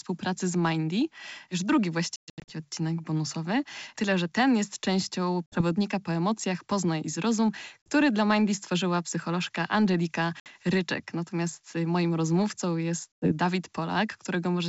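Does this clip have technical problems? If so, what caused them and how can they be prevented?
Yes. This speech has packet loss on an ADPCM call, which shows up as five hard-edged silent holes. The worst runs from 2.16 to 2.52 s, just before "odcinek bonusowy". About 260 ms is missing in scattered gaps, the longest 120 ms. Shorter holes fall at 5.47–5.62 s between "że ten jest częścią" and "po emocjach", and at 7.83–7.88 s and 10.40–10.47 s. The last is at 13.15–13.32 s after "moim rozmówcą". Each loss throws the decoder's predictor and step size out of step with the sender's. The sound then resumes with a click, a level jump or brief distortion before settling. The G.722 wideband coding itself sounds clean. Prevention: use a jitter buffer with packet-loss concealment that resets the ADPCM decoder state, and carry the call over a network with less loss.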